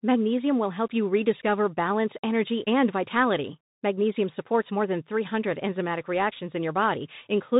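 Right from the start and all the way through, this speech has the Bluetooth CVSD headset codec sound, plainly audible. Nothing gets above 4 kHz, so it's muffled and narrow. The one-bit delta coding, which fits a 64 kbit/s stream, leaves a granular hiss underneath, and its adapting step can't keep up with loud high content, so s sounds come out scratchy.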